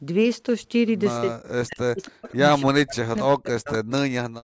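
From 1.19 to 2.44 s the speech sinks and breaks apart, falling by roughly 40 dB at its deepest, with about a second of the stretch affected. This is speech suppressed in double talk, likely because the far side was talking at the same moment and the echo canceller, unable to tell this talker from the loudspeaker echo, turned everything down together.

Inside that stretch, at 2.01 to 2.11 s and again at 2.27 to 2.36 s, faint scraps of a delayed copy of the voice come through, trailing by 282 ms and sitting about 25 and 30 dB below the speech. This is echo leak, most likely from a loudspeaker end whose canceller failed to remove all of what its microphone picked up, so the remainder was sent back.

The same suppression returns from 2.63 to 3.91 s, again cutting roughly 40 dB at its worst and affecting about a second of audio. Near its end, at 3.72 to 3.78 s, a louder burst of echo leak appears, with the same 282 ms delay and only about 15 dB under the speech. 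Throughout, the call's microphone processing trims the lowest bass as expected, and nothing in the clip extends above 8 kHz.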